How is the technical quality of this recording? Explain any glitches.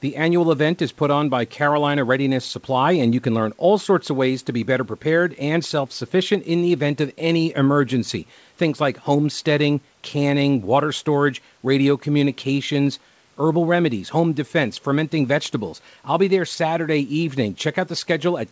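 No glitches or faults heard.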